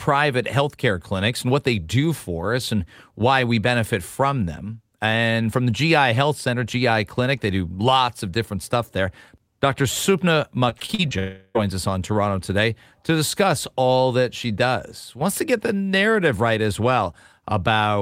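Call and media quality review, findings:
Repeated packet loss (robotic sound), 10.69–11.13 s. Choppy speech with small pieces missing. Five gaps, longest 40 ms, about 120 ms lost in total. Component: network path and jitter buffer. Mechanism: each gap is filled by extending the previous audio. About 31% of the span is concealed this way.

Long network dropout, 11.19–11.63 s. Speech gives way to a buzzy continuation of the last sound that fades over roughly 360 ms. About 30 ms of silence follows. Speech then resumes, with that stretch gone. The likely cause is a network outage, with the receiver's concealment covering the gap.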